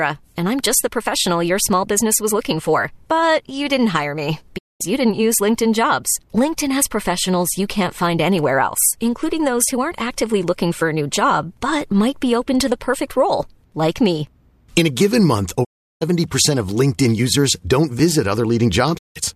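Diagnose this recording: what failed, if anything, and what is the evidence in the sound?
A digital broadcast dropout at the reception stage. The speech fades out over about 20 ms and goes silent from 4.57 to 4.82 s, after "you didn't hire me". It happens again from 15.63 to 16.03 s, after "a given month", and from 18.97 to 19.17 s. The receiver muted on bad frames. That audio is lost.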